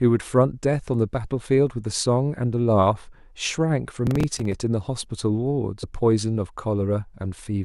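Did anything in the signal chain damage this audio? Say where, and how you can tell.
Yes. The trouble sits at the driver or buffer stage, where the processor fell behind and a run of buffer deadlines went unmet, a processor overload crackle. From 4.07 to 4.53 s a gritty tearing rides over the speech. Each missed buffer, roughly 5 ms long, was filled with a stale piece of earlier audio that starts and stops with hard edges. Around ten such misses in quick succession fuse into one burst of crackle, which clears once the load eases.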